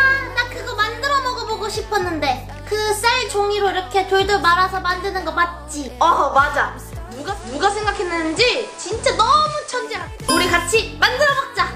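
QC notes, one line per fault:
7.03 to 10.20 s: digital radio blending to analogue. The receiver lost its digital stream and cross-faded to the FM broadcast of the same station, then back. Each blend takes about 0.42 s. The level holds steady. FM hiss sits roughly 25 dB below the signal.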